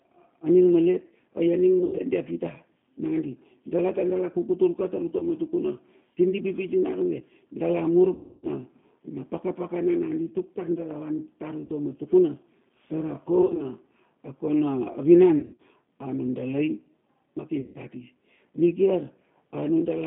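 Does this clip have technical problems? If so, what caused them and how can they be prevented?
Yes. The G.729 codec colours the whole recording. Nothing is heard below about 150 Hz or above 3.5 kHz, and the speech has a slightly rough, synthetic grain, which points to G.729A at 8 kbit/s. The decoder rebuilds each short frame from a vocal tract filter, a pitch predictor and a few pulses. Unlike plain telephone band-limiting, which stays smooth within its band, this adds a buzzy, reconstructed texture. Carrying the call on a wideband codec such as G.722 or Opus would prevent it.

VoIP packet loss concealed by the speech codec appears at 1.79–2.02 s, 5.18–5.24 s just after "ka tar", 8.15–8.48 s, 11.65–11.70 s, 13.42–13.63 s, 15.39–15.61 s and 17.60–17.77 s just before "kati nikiar". The longest gap is about 280 ms, at 8.15 s. At 1.79, 13.42 and 15.39 s the losses are scattered. At each gap the decoder keeps repeating its last pitch and filter with falling gain, so the sound stretches into a fading buzz or coloured noise rather than dropping to silence or clicking. 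Since each frame builds on the one before, the speech stays weak for a moment after packets return. A better network path with jitter buffering, plus forward error correction or redundancy, would prevent it.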